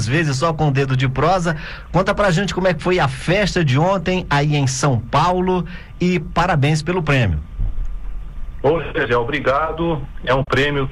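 Near the end, from about 10.42 to 10.48 s, the sound briefly drops out in an AAC frame loss with muting. A single lost frame of about 43 ms, which fits a 1024-sample frame, was replaced by silence because the decoder zeroed its spectrum. Overlapping windows taper the sound out and back in, so the hole has soft edges. On a spectrogram it appears as a narrow vertical gap across all frequencies. The waveform shows a smooth taper down into a brief dip and back.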